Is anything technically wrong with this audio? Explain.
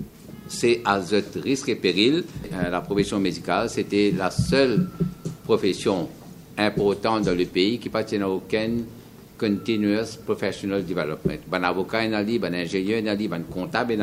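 No, nothing technically wrong is audible anywhere in this recording.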